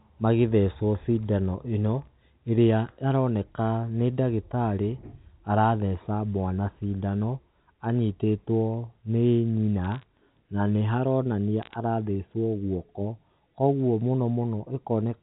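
Bit errors on a digital phone line crackle from 9.84 to 10.03 s, after "cindano anyitĩtwo nĩ nyina", and 11.62 to 11.74 s. Flipped bits corrupt single samples, giving sharp ticks.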